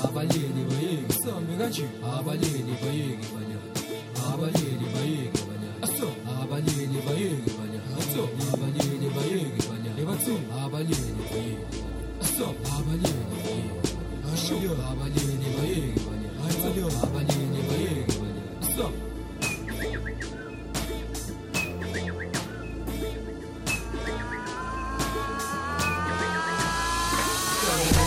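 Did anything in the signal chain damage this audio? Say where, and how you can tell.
No, nothing in the signal chain damaged this audio.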